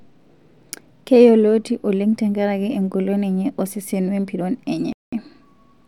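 At 4.93 s, just after "enye osesen wempiron", the speech drops out completely. The gap lasts about 0.2 s, to 5.13 s. Then the sound returns abruptly. The pattern points to a Bluetooth stall. The likely cause is radio interference delaying packets on the wireless link. The receiving buffer emptied, so playback had nothing to play. It went silent until the delayed audio arrived.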